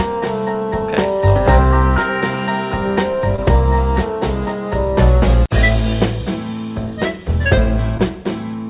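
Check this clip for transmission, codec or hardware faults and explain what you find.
Two brief dropouts occur, heard over a call path whose narrowband sound, with nothing above 4 kHz, fits G.711 A-law. Short concealed packet loss at 3.36–3.40 s and 7.98–8.01 s: about 20 ms of audio arrived too late each time, and the receiver extrapolated the preceding sound before blending back, leaving a quick smear or wobble.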